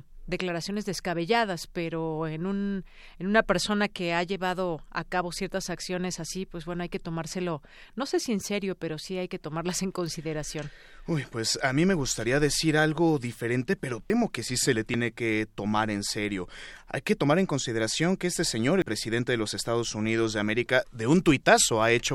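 Speech with three skips at 14.1, 14.94 and 18.82 s, each a small jump that skips a few tens of milliseconds, likely dropped buffers (overrun), showing as abrupt waveform splices.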